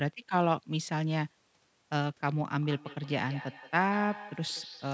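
From 2.62 s to the end of the speech, a feedback echo between two devices appears. A second device in the room plays back this microphone's sound, the microphone picks it up again, and no echo canceller removes it. Each syllable returns about a fifth of a second later, thinner and more ringing, peaking about 15 dB below the speech. On a spectrogram, each stroke has a fainter copy to its right, cut off at 8 kHz like the rest of the call audio.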